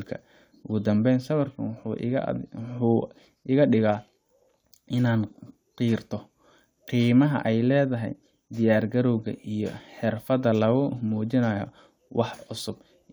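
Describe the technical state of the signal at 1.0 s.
Nothing is wrong with the signal at 1.0 s; the audio is intact there.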